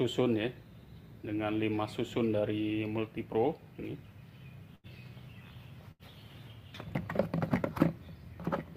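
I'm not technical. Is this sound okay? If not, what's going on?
No. There are two short dropouts, at about 4.75 s and 5.91 s. Each is a burst of packet loss: a small chunk of the audio never arrived in time. For about 80 ms, the player filled the hole by stretching the last sound and letting it fade, so you hear a brief buzz or hiss. Then the audio jumps ahead. About 80 ms of the original is simply gone each time.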